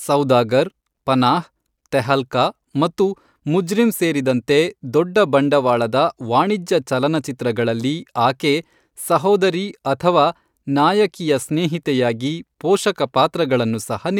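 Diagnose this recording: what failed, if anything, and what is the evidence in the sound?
Nothing failed; no fault is audible in this speech.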